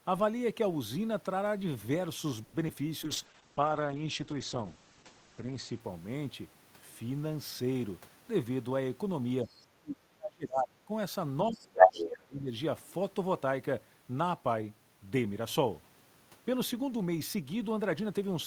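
A speech recording of a call with several network and echo-control faults. At 2.43 to 2.55 s a call audio freeze stretches the last sound into a fading buzz for about 100 ms, most likely because packets were held up and the jitter buffer ran dry. Nothing is lost, and the talk resumes where it stopped about 100 ms late, which separates it from the short concealed packet loss at 2.67 to 2.70 s, where 20 ms of real audio is gone and a brief smear or wobble covers the hole. From 3.04 to 5.86 s a call bitrate drop from 64 to 10 kbps makes the speech rough and watery, and the bandwidth narrows from 20 kHz to 8 kHz, so it sounds muffled for about 2.65 s. This differs from a gap or smear because the damage is continuous and affects tone rather than timing. A jitter buffer speed-up from 8.0 to 9.04 s plays the speech at about 110% speed with unchanged pitch, trimming roughly a tenth of a second of backlog. 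The hurried pace without any chipmunk effect points to pitch-period removal rather than resampling. At 9.62 to 9.66 s a faint scrap of the other side's voice leaking through appears about 30 dB below the talker. A louder stretch of leakage follows at 11.53 to 12.06 s, roughly 15 dB above the speech, and both are likely loudspeaker echo the canceller missed. Speech suppressed in double talk pulls the talker down by up to about 30 dB from 9.8 to 10.91 s and by up to about 25 dB from 11.49 to 12.5 s. Unlike the loss or freeze, these dips likely track the other side's speech rather than packet timing.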